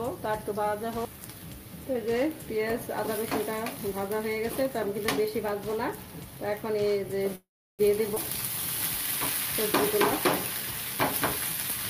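At 7.35 s the sound stalls: the last instant is carried on briefly as a fading buzz or hiss, then drops into roughly a third of a second of silence before resuming at 7.81 s right where it stopped, with nothing lost. This is a call audio freeze. The likely cause is packets held up in transit, so the jitter buffer ran dry and the receiver stretched the last audio to cover about 0.43 s, inserting a gap rather than cutting anything.

Shortly after, between 8.15 and 8.18 s, the sound lurches forward with almost no pause, a skip ahead. Around a tenth of a second of audio is simply gone, and the material on either side of the jump is butted together. Later packets were already queued when this stretch was dropped, either in transit or by the jitter buffer discarding audio. That let playback leap past it and recover some of the delay added by the freeze just before.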